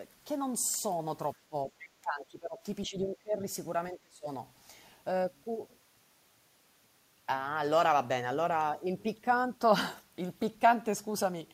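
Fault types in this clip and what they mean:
speech suppressed in double talk: the speech dips by around 15 to 25 dB in three spells from 1.49 to 4.28 s, likely an echo canceller ducking both sides during overlap.
other side's voice leaking through: a faint second voice, roughly 20 dB under the speech, surfaces at 1.79 to 1.89 s, likely loudspeaker echo the canceller failed to remove.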